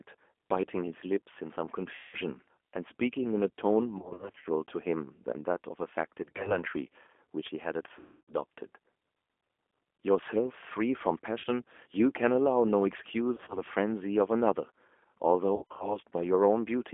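Throughout the speech, the G.729 codec is plainly audible. At 8 kbit/s it models each 10 ms frame with a vocal tract filter, a pitch predictor and a few pulses. The line band runs from 250 Hz to 3.4 kHz. Low bass and all the air above it are gone. The result sounds rough, thin and slightly synthetic.

VoIP packet loss concealed by the speech codec strikes seven times: 1.95 to 2.16 s, 3.99 to 4.47 s, 6.23 to 6.57 s, 7.99 to 8.34 s, 11.39 to 11.46 s, 13.35 to 13.62 s and 15.56 to 15.98 s. The decoder fills the gaps from its last pitch and filter. It fades the gain as it goes. The longest losses, near 8.0 s and 4.0 s, total about 290 ms and 270 ms. There the sound smears into a buzzy tone or a coloured noise that fades. Losses near 4.0, 6.2, 13.3 and 15.6 s are scattered over about 460, 220, 160 and 240 ms. Recovery lags after each.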